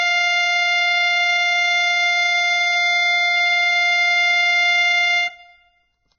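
Music, carrying heavy Vorbis compression damage throughout: grainy, hissy treble, roughened tones and smeared attacks, likely from a very low bitrate around 12 kbps. A spectrogram shows a flat ceiling with nothing above 6.7 kHz.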